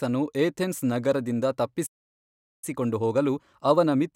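At 1.86 s the player most likely ran short of buffered data or had its output thread blocked, producing a playback stall: the speech cuts off mid-flow into silence for about 0.76 s, until output resumes at 2.64 s.

From 2.64 s to the end, the player works off the backlog built up during the stall with time-compressed catch-up, trimming small pieces of audio and cross-fading across the gaps. The speech runs about 1.1 times faster, hurried but at normal pitch.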